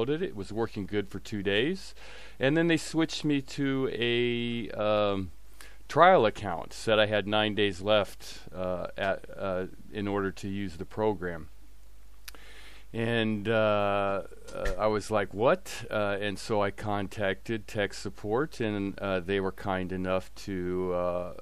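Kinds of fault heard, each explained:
No technical faults can be heard anywhere in the recording, with the signal holding steady and continuous throughout.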